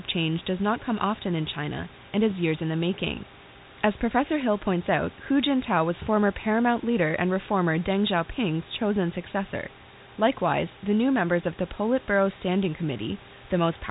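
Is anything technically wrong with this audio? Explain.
No, nothing's wrong here: it's speech carried the way a phone line normally carries it, with nothing much above 3.8 kHz and the room's own background sitting about 21 dB below the voice.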